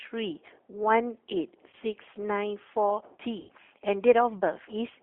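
Throughout, the speech carries G.729 codec damage: the band runs only from 200 Hz to 3.4 kHz, and the sound is plainly rough and synthetic, which fits an 8 kbit/s G.729A stream rebuilding speech from a filter, pitch predictor and sparse pulses.

At 1.70 to 1.74 s, VoIP packet loss concealed by the speech codec briefly stretches the last sound out, matching about 30 ms lost, or one packet. At 3.40 to 3.50 s a longer gap, about 90 ms, or three packets, is extrapolated and faded, leaving weakened, distorted sound.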